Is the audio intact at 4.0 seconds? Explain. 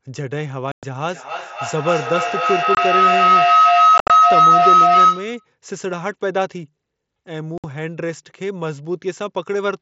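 No. Two faults overlap there. A feedback howl runs from 1.06 to 5.54 s: the microphone picks up a loudspeaker in the same room carrying the same call, and each trip round that loop adds gain. The repeats grow rather than decay and collapse onto a tone of roughly 1.5 kHz, repeating about every 300 ms with the loop delay, and peak at about 10 dB above the speech.

Inside that span, from 3.98 to 4.10 s, there is unconcealed Bluetooth headset packet loss. Voice packets between headset and phone went missing and were filled with silence or an idle pattern instead of being patched over. About 105 ms of audio drops out across that 120 ms window, the longest single gap lasting 67.5 ms. The hard-edged holes chop the speech into a rough stutter.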